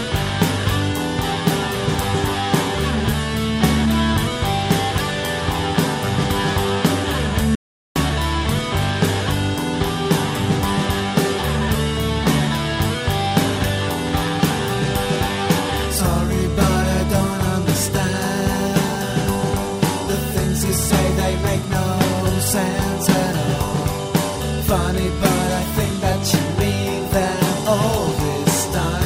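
An audio dropout to silence occurs from 7.55 to 7.96 s, most likely because the input feed was briefly lost, whether through a disconnected device, a failed link or an accidental mute, while the recorder kept writing silence. The sound stops abruptly mid-flow and returns just as suddenly after about 407 ms. That gap is dead silence with no trace of room tone, and whatever was happening in the sound during it is gone.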